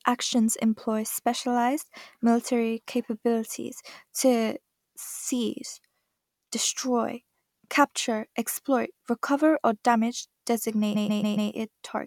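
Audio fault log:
10.94–11.50 s repeated frames: one 139 ms block of speech replays four extra times, a stutter that adds sound rather than dropping any, and lengthens the clip by 0.56 s.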